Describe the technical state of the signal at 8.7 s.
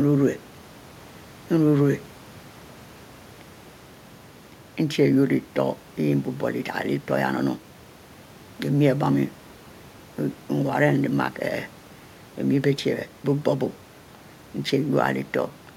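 At 8.7 s the speech signal is intact, with only the room noise of the recording space sitting about 28 dB below it.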